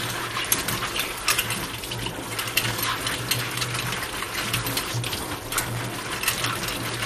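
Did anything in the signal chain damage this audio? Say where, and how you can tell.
Yes. At the codec stage, the whole clip is dull, with nothing above 15.5 kHz. There is a plainly audible gurgling, granular texture. Upper bands drop out and the remaining ones are coarsely quantised. This is likely MP2 compression at a low rate, which fits about 64 kbps.

At the driver or buffer stage, buffer tearing runs from 5.56 to 6.47 s. A rattling buzz at 93.8 Hz appears, which fits a 512-sample buffer. Writer and reader have slipped. A small slice of each buffer repeats audio from roughly 20 ms earlier, with hard joins.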